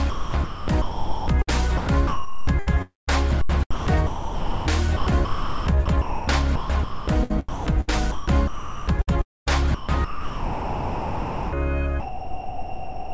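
From 0.10 s to 13.13 s the audio turns choppy, with about 7.8 s swapped for comfort noise; this is likely sound chopped by the voice detector.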